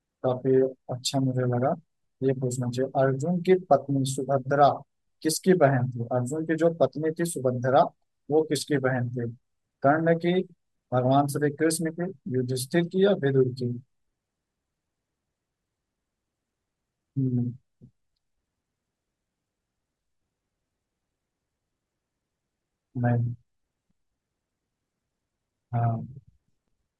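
Nothing technical stands out in this speech recording; there's no fault to point to anywhere in it.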